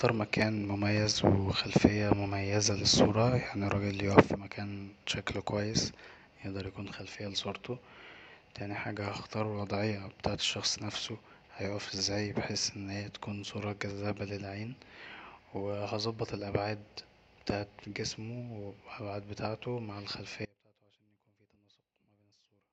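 At 20.46 s, right after "بتاعته مع", the speech drops abruptly to a faint residue roughly 30 dB down, holding to the end of the clip. This is an audio dropout, likely a lost feed with the downstream path still live; the sudden cut, not a fade, separates it from a pause.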